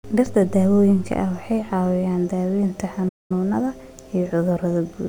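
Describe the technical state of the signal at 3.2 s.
At 3.2 s the speech has dropped out in a playback stall, silent from 3.08 to 3.32 s, likely the player starving for data before resuming.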